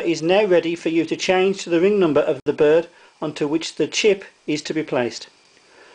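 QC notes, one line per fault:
2.40–2.46 s: gap at a join of encoded pieces, a 63.5 ms gap with smeared edges from encoder delay and end padding left untrimmed; sound resumes where it stopped.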